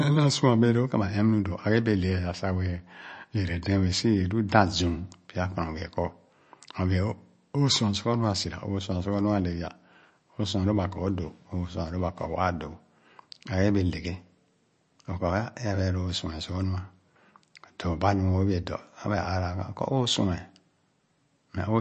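Right through the speech there's a hard ceiling near 8.3 kHz and a watery swirl, likely MP3 compression, which fits a bitrate of around 34 kbps.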